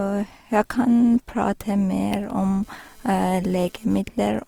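Throughout the speech, tones sound grainy and rough with a noisy texture, plainly audible, likely Opus compression in its music mode at a rate around 24 kbps. From 2.24 to 4.01 s, a GSM phone buzz appears: a hard, raspy 217 Hz buzz with many harmonics, coming and going as a data transfer pulses, about 32 dB below the speech.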